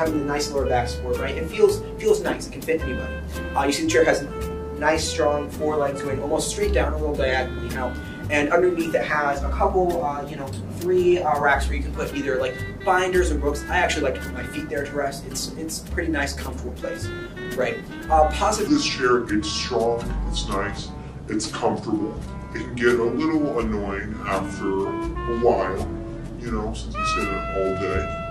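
At 18.67 s the audio switches abruptly to a section at the wrong speed, which runs to the end of the clip. Playback drops to 0.76 times the original rate, so everything slows and falls in pitch together, roughly five semitones lower. The result is a dragging, deepened sound with stretched timing. The likely cause is that this part was played or rendered against the wrong clock, with speed and pitch locked to that mismatched rate.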